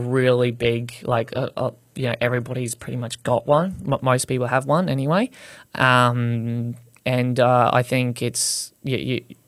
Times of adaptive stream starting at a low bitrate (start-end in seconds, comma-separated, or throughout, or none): 0.00-4.00